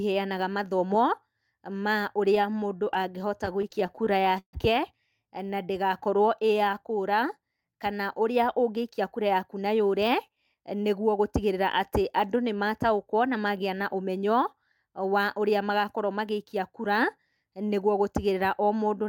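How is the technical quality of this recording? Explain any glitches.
Three playback-timing faults affect this speech recording, all within its first twelve seconds.

From 2.35 to 4.55 s the speech drags and stutters through repeated stalls. The jitter buffer ran dry 24 times, and the receiver stretched the last sound to fill 378 ms, with the longest hold lasting 143 ms.

From 5.56 to 6.72 s the speech plays at 93% speed with unchanged pitch. This is a jitter buffer slow-down: repeated pitch periods added 86 ms to rebuild the buffer reserve.

From 8.69 to 11.58 s the speech sounds hurried at 107% speed. This is a jitter buffer speed-up: clipped pitch periods removed about a fifth of a second to cut the excess delay.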